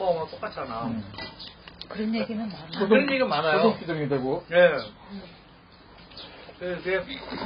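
AAC compression damage runs throughout: nothing sounds above 5.2 kHz, leaving the audio dull, smeared and fizzy. The likely cause is heavy AAC-LC coding, consistent with a bitrate around 16 kbps, which discards the upper bands and coarsely quantises what remains.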